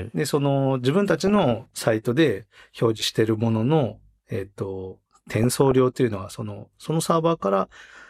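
From 1.20 to 1.80 s, and again from 5.43 to 5.80 s, the speech is overlaid with short blips of noise: DAB burbling. Weak reception lets a small fraction of bit errors slip past correction into the MP2 data, so wrong samples put short blips of noise into single sub-bands.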